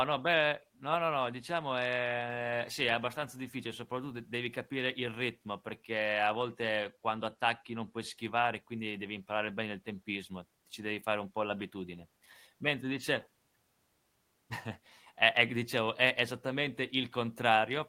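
No technical faults can be heard anywhere in the speech recording, whose signal holds steady throughout without any audible disruption.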